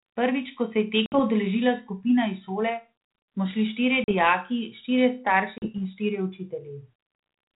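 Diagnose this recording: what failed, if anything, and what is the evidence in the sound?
Packet loss on an ADPCM call, a network-stage failure, shows as three hard-edged silent holes: about 60 ms at 1.06 s, then about 40 ms at 4.04 s and 5.58 s, each consistent with a few packets going missing. Unlike a plain dropout, the speech comes back with some distortion lasting a few tens of milliseconds. The decoder's adaptive predictor and step size drifted from the sender's during each gap and had to resynchronise.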